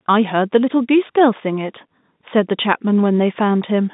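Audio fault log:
No faults heard; telephone-band speech, nothing above 3.8 kHz.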